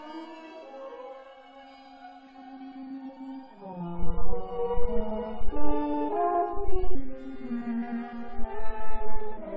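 At 6.95 s the music drops to about 0.73 times its speed and about 5.6 semitones lower in pitch until the end at 9.56 s. This is a wrong sample rate, consistent with audio recorded near 22 kHz being played at 16 kHz without conversion, so everything sounds slow and heavy.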